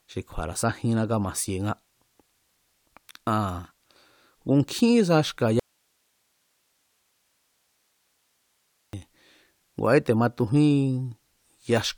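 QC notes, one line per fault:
throughout: low-bitrate audio saved at a high bitrate. The codec artefacts point to a 64 kbit/s AAC source likely re-encoded as 192 kbit/s MP3. Nothing above 20.1 kHz.
5.60 to 8.93 s: audio dropout to a faint residue. The signal cuts out abruptly for 3.34 s, leaving hiss around 45 dB down, likely from a live path after a break.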